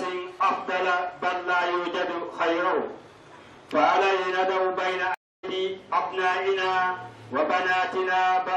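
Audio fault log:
5.14–5.45 s, stream reconnect: the sound cuts to about 0.29 s of silence, then resumes roughly a fifth of a second further on, as though the connection dropped and playback rejoined a live stream with a freshly started decoder, whose first frames come back muted or fading in. Unlike a plain dropout, which resumes on the original timeline after the gap, or a buffer underrun, which delays the material, this gap skips ahead and loses audio.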